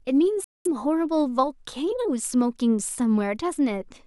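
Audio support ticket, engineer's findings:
Speech cuts to silence from 0.44 s to 0.66 s, a gap of about 209 ms. Speech resumes further along, as if it kept playing. Likely a Bluetooth dropout: packets missed the headphones' deadline and were discarded. The gap fits roughly nine lost packets.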